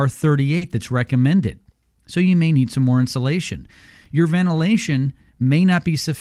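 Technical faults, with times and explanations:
0.57–0.63 s, short concealed packet loss: just before "that's recommended", about 40 ms of audio went missing and the decoder filled it by extending the preceding sound. It is heard as a brief smear. A spectrogram shows the preceding sound stretched smoothly across the gap.
0.61–0.67 s, lost packet rebuilt from error correction: overlapping that stretch, still before "that's recommended", about 40 ms was played from low-bitrate backup copies, which points to two lost packets. The sound turns rougher and noisier there. A spectrogram shows a grainier, blurred patch.
4.04 s, chunks out of order: right after "need some more insulation", a chunk of about 5.33 ms plays after audio that should follow it, which fits it arriving two chunks late. It is heard as a tiny jumbled moment. A waveform shows sharp discontinuities at the joins, and a spectrogram shows thin vertical broadband lines.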